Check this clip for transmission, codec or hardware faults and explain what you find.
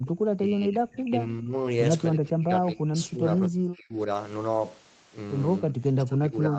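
The clip has two echo-canceller faults. Its high end stops at 8 kHz, which fits a wideband Opus call path.

Background gated by the echo canceller, 0.00 to 0.06 s: with the loudspeaker active, the canceller pulled the microphone down by about 25 dB. The room sound briefly drops to near silence at the very start, then returns once the canceller releases.

Speech suppressed in double talk, 0.34 to 1.55 s, 2.14 to 3.99 s and 5.61 s to the end: the speech dips by roughly 20 to 30 dB. The likely cause is the canceller failing to tell the near talker from loudspeaker echo during overlapping talk and attenuating both.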